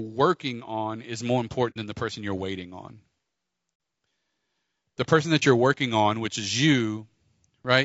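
Speech run through low-delay AAC compression, likely AAC-ELD at a low rate that fits about 32 kbps, sounds plainly rough and grainy throughout, with noise between harmonics. AAC frame loss with muting, where the decoder zeroed missing frames, leaves soft-edged holes that fade out and back in at 1.70 to 1.77 s and 3.74 to 3.80 s, gaps that fit two lost frames, and a brief dip at 5.39 to 5.43 s, which fits one.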